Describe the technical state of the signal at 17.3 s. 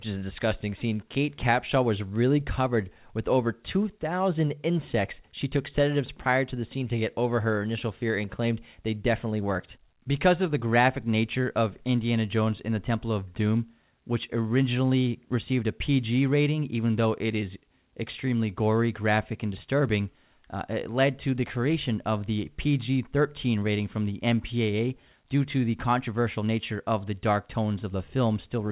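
At 17.3 s the speech is intact, with no fault, only the steady band limit of the call path at 4 kHz, which fits a G.711 A-law link at 64 kbps.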